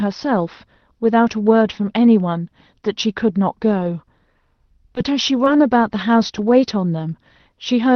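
At 4.95 s and again at 5.45 s, short concealed packet loss: about 20 ms went missing and the decoder extended the preceding sound for roughly 11 ms, heard as a brief smear, visible as a smoothed, repeated stretch in the waveform.

Right behind each, at 4.97 s and 5.46 s, and alone at 6.38 s, a lost packet rebuilt from error correction fills 20 ms with a rougher, noisier copy, showing as grainier energy on a spectrogram with no gap.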